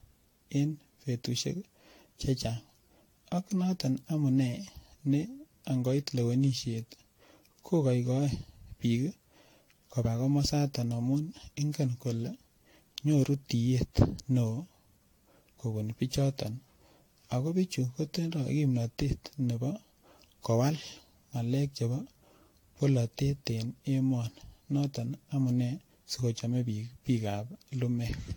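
Generation loss throughout: swirly, hollow, smeared speech with blurred attacks and nothing above 19.3 kHz, likely from about seven AAC-LC re-encodes, each re-quantising afresh.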